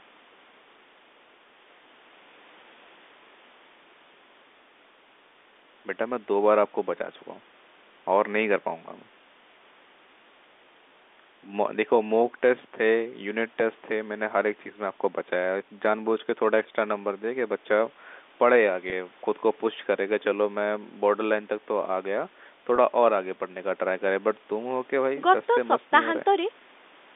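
At 18.9 to 18.92 s, and again at 22.76 to 22.78 s, the speech briefly holds on one buzzy tone. Each is packet loss with pitch repetition. About 20 ms of audio went missing each time, which fits a single lost packet. The receiver filled the gap by repeating the last pitch period it had. The gaps are short, so nothing fades to silence. You hear a slight hitch and a hold, then the speech carries on through the narrow telephone band of the G.711 line.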